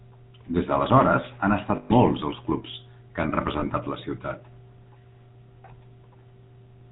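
Throughout, the speech carries the buzzy, gravelly roughness of the GSM full-rate codec, which fits a 13 kbps coder. It rebuilds the vocal tract from a pulse-train excitation that keeps only every third sample. Nothing above 4 kHz survives, so the top end is plainly dull and rasping.

Lost GSM frames occur at 1.76 to 1.92 s and again at 3.6 to 3.65 s. The decoder repeated the last good frame's settings. The first gap of about 140 ms, consistent with seven 20 ms frames, rings metallically. The second is a brief rough smear.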